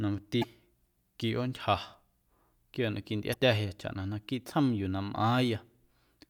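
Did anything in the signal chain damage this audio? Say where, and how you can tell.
Yes. The damage sits at the codec or storage stage: damaged data in the compressed stream. Two short glitches in the speech, at 0.40–0.45 s and 3.30–3.35 s, each about 50 ms long, break through where the decoding is disrupted. The mechanism is corrupted frames. The decoder misreads the bad bytes, loses frame sync, and searches until it locks onto the next valid frame header.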